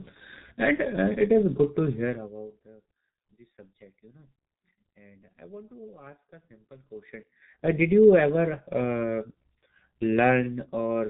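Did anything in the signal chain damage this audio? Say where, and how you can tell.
Yes. Throughout the clip the speech is muffled and hoarse, with smeared consonants and nothing above 3.8 kHz. That points to the codec stage: heavy G.723.1 coding, likely near 6 kbit/s, whose 30 ms frames and slowly updated voice model blur fast detail.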